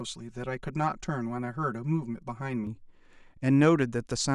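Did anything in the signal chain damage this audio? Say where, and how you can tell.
Yes. From 0 to 2.67 s, channel delay (comb filtering) at the mono fold-down makes the speech hollow. One channel lags about 5 ms, leaving static notches from roughly 100 Hz upward. A sweeping phaser would move them.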